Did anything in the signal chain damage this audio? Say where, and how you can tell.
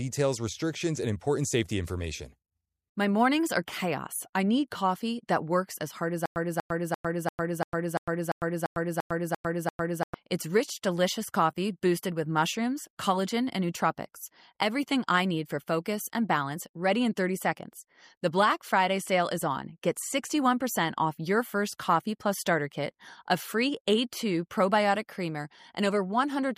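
Yes. From 6.26 s to 10.14 s the sound catches on a short fragment of about 240 ms and repeats it 11 times, each burst followed by roughly 103 ms of dead digital silence, so the stutter with silent gaps ticks along at an even 343 ms period. This likely comes from a stalled playback or stream buffer: at each retry it replayed the last fragment it held, then ran dry. The audio that belonged in that span is lost.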